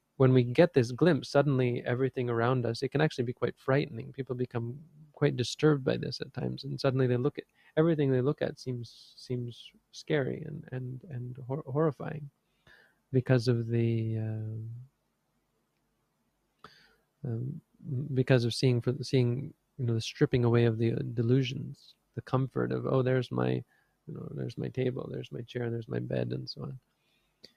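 A noise suppressor designed for speech was left running on this non-speech audio, so the noise suppressor is applied to music or sounds throughout. It treats sustained tones, ambience and decaying tails as noise and continuously rides the level, swinging by roughly 5 dB. Sharp onsets pass while held material sags, giving a pumping, thinned character across the whole clip. There are also distinct passages of sound cut by the noise suppressor, where it clamps down hard, by as much as about 18 dB, pulling steady or fading sound well below its surroundings and truncating decays while transients survive. These occur at 3.34–7.77 s and 14.87–17.84 s, each with around two seconds of audible loss, and more briefly at 9.71–9.94 s, 12.3–13.13 s, 19.53–19.79 s and 21.93–24.08 s, and from 26.79 s to the end.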